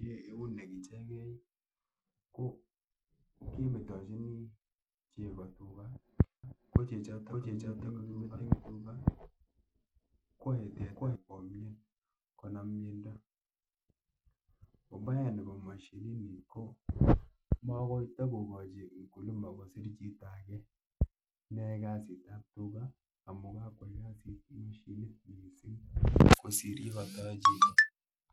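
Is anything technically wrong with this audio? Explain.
Yes, two faults. Throughout, the treble flickers and drops out under a gritty, aliased haze, likely from Bluetooth SBC compression starving the upper sub-bands at a low bitrate, around 96 kbps. From 6.44 to 11.16 s, a second, equally loud copy of the speech trails about half a second behind, starting and stopping abruptly with no room colour, likely a doubled audio track captured twice.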